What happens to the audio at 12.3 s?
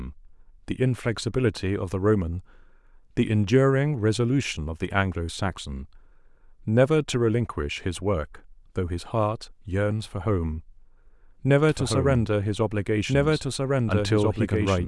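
A slower path likely recaptures the speech, giving a doubled audio track from 11.69 s onward: an equally loud, dry copy lagging about 1.5 s.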